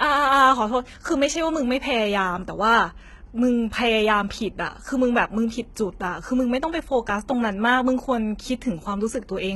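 Speech runs throughout with heavy HE-AAC compression damage, likely at a bitrate near 16 kbps. The treble is rebuilt from copied lower bands, making sibilants gritty and metallic, and nothing remains above 11.8 kHz.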